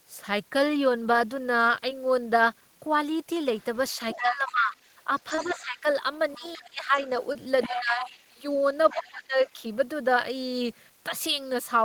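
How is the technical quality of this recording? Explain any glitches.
The quality is impaired by three kinds of fault on this speech call.

Short concealed packet loss occurs at 1.89 s, 5.35–5.39 s and 7.33–7.36 s. Missing audio was patched by extending the previous sound, leaving brief smears.

The other side's voice leaking through is audible from 3.58 to 8.27 s and from 8.90 to 9.50 s, roughly 15 to 20 dB down. Incomplete echo cancellation is the likely cause.

Speech is suppressed in double talk from 4.20 to 6.98 s and from 7.68 to 9.60 s. The voice dips by up to about 20 dB, likely as the canceller turns everything down.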